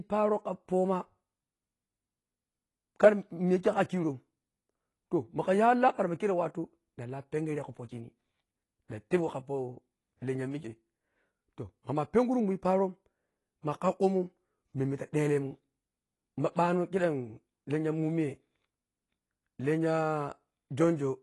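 From start to finish the speech sounds dull and smeared, with nothing above 11.5 kHz and a fizzy, warbly edge on sibilants. That's likely AAC compression at a low rate, around 32 kbps, starving the frame's spectral lines and chopping the top.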